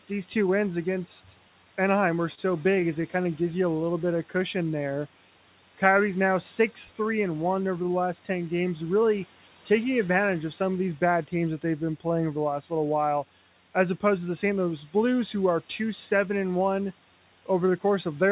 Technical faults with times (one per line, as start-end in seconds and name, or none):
2.35-2.39 short stall from a late packet